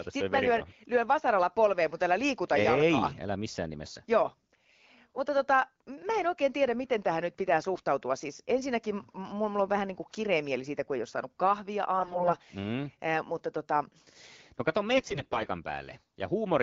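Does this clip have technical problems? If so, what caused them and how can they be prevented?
Yes. AMR bit errors: on a weak radio link, poorly protected bits in AMR frames arrived flipped while the checksum still passed. This misplaced the excitation pulses and skewed pitch, gain and spectral detail. The speech keeps its pitch and level but turns hoarse and gargly at 7.74 to 7.82 s, 11.98 to 12.36 s (the harshest burst) and 14.98 to 15.47 s. Better signal coverage, or stronger channel coding with bad-frame concealment, would prevent this.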